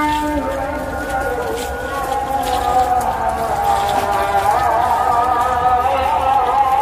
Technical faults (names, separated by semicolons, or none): word clock ticks